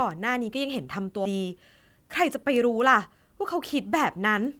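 At 1.25 to 1.33 s, a skip ahead: roughly 0.7 s of speech was dropped, and playback jumps forward through a brief 10 ms join, cutting content abruptly.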